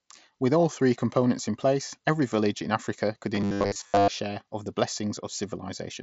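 From 3.35 to 4.08 s, just before "share of the", the speech turns into a rigid, metallic buzz pitched at 100 Hz that only loosely follows the syllables. This is robotic sound from repeated short buffers, most likely a playback path starved of fresh audio, replaying the last 10 ms block to fill the gaps. About 70 percent of that stretch is repeated material, and the skipped audio is lost. The audio is band-limited mSBC headset audio, with nothing above 7.7 kHz.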